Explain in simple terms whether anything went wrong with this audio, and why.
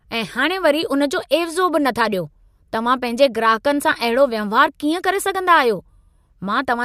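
Nothing went wrong with this recording of speech. No faults can be heard anywhere in it.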